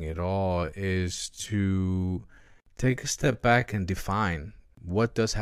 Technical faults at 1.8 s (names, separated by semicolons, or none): time-stretched section